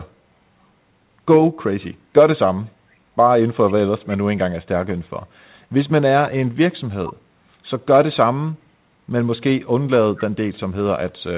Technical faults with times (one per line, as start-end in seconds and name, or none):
3.67-3.74 echo leak
10.16-10.24 echo leak